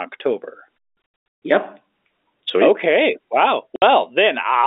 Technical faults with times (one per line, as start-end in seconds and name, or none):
1.02-1.42 packet loss filled with silence
3.76-3.82 packet loss filled with silence